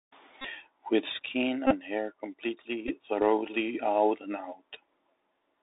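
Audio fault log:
Throughout: Bluetooth CVSD headset codec. The speech passes through a narrowband 64 kbps one-bit delta coder with a roughly 300 Hz to 3.7 kHz line band. Its adapting step lags loud high sounds, so sibilants turn scratchy and a granular hiss sits beneath the speech.
0.41–0.47 s, 1.67–1.76 s, 2.88–2.94 s: Bluetooth headset packet repeated. Lost voice packets were replaced by re-decoding the previous packet's bits, which produces a steady buzz near 267 Hz from the 3.75 ms repeat cycle. The longest gap, about 37.5 ms, fits roughly ten missing packets. The shortest, about 11 ms, fits three.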